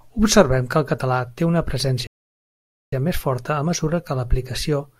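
At 2.07 s, right after "el català té una", the speech stops dead and silence holds until 2.92 s, when it picks up again with "més forta". That is a rebuffering stall: playback ran out of downloaded audio and waited about 0.86 s for more to arrive. What separates it from a dropout or packet loss is that nothing is missing. The speech resumes exactly where it halted, so the gap only adds time.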